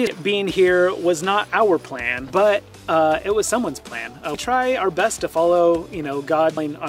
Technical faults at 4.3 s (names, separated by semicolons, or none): damaged data in a compressed stream